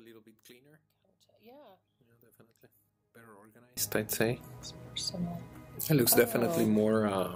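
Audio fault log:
0.0–3.77 s, one channel inverted: summed to mono, the shared content cancels, dropping about 29 dB, likely from one stereo channel carrying reversed polarity.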